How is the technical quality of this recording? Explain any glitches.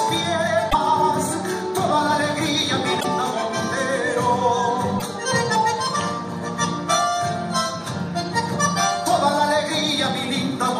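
The recording has three short glitches, at 0.69 to 0.75 s, 2.99 to 3.05 s and 4.98 to 5.02 s. They are likely a broken MP3 bit reservoir: after missing frames, the decoder borrows bytes from the wrong frame, so the audio skips ahead and garbles for roughly two 26.1 ms frames.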